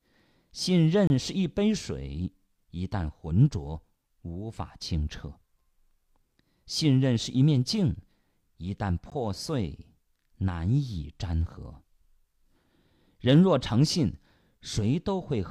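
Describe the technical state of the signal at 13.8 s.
At 13.8 s the speech signal is intact, with no technical fault audible at that moment.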